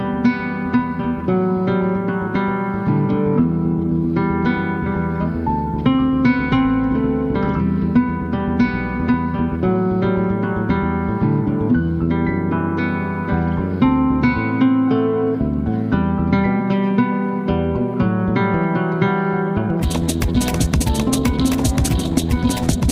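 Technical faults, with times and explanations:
19.54 to 22.91 s, time-stretched section: from 19.54 s to the end the audio runs at twice its normal pace while the pitch stays where it was, so the closing stretch sounds rushed. This is likely software compression of the passage to fit a shorter length, keeping pitch constant by discarding short slices of the signal. The pace change arrives abruptly rather than gradually.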